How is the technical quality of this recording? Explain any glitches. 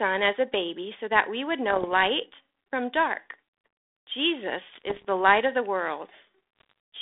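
It's telephone-band speech through 32 kbit/s G.726 ADPCM, with three patches of bit errors on the ADPCM link: 1.69 to 1.89 s, 4.68 to 5.05 s, and 6.59 to 6.72 s. Stray flipped bits, around 0.7 to 1 percent of them, knock the decoder's step size and predictor off track, so you hear pops and rough, level-jumping bursts.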